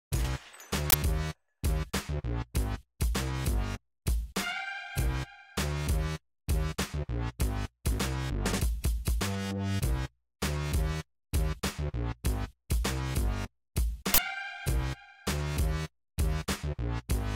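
Two short bursts of loud digital noise interrupt the audio, at 0.90 s and 14.14 s, each lasting 40 ms. Both are uninitialised buffer faults: a 40 ms output block was played before any audio was written to it, so leftover memory contents reached the output as garbage samples.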